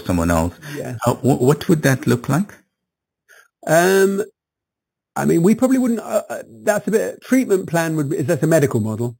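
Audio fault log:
throughout: imaging from sample-and-hold upsampling. Each sample was repeated without a smoothing filter, which fits an 8 kHz to 44.1 kHz conversion. Mirrored copies of the speech spectrum result, the first at 4 to 8 kHz and about 18 dB down, heard as metallic fizz following the speech.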